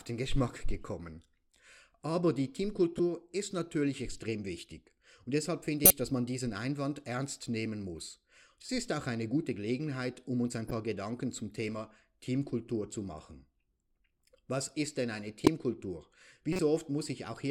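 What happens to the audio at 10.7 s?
Right after "um uns ein" there's a corrupt frame decoded, running from 10.67 to 10.71 s. A single compressed frame got its bits scrambled but was played anyway, so misread gains scatter energy into the wrong frequencies, giving a short chirpy blip around −25 dBFS.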